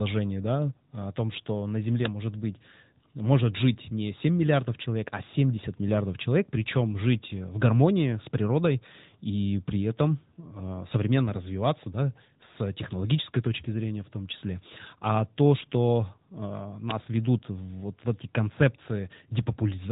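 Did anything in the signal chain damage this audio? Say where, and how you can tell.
Yes: AMR narrowband mobile codec throughout, at the codec stage. Nothing above 3.8 kHz survives, and its pulse-driven vocal-tract model leaves buzzy speech, which fits a mode near 10 kbps.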